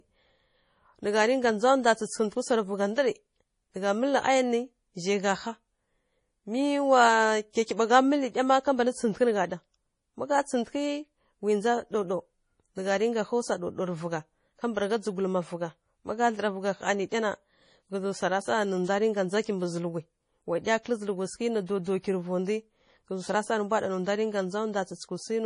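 Starved of bits throughout, the encoder removes everything above 10.6 kHz and drops weak spectral lines that flicker between frames. The speech sounds dull, watery and swirly, with chirpy sibilants. This is likely MP3 compression at a very low bitrate, around 32 kbps.

Pre-echo occurs at 20.64 to 20.66 s, 20.83 to 20.86 s and 21.66 to 21.68 s, where quantisation noise sized for a sharp onset spreads back across its transform block. A brief hiss of about 21 to 28 ms precedes each attack, which sounds softened and smeared.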